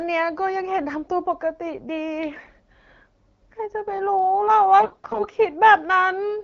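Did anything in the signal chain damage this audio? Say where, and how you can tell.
Yes. AMR bit errors from the radio link damage the speech in two bursts, 2.35 to 2.49 s and 4.80 to 5.25 s. Bits in the less protected part of each frame arrived flipped, on the order of one in ten, so the excitation pulses and the fine pitch, gain and spectral values decode wrong, and the sound turns scratchy and gargled. Unlike packet loss, there is no dropout or concealment fade. Pitch and level roughly carry through, and the lengths fit about six and twenty frames. Around these bursts, the AMR-WB coding at 12.65 kbit/s sounds clear.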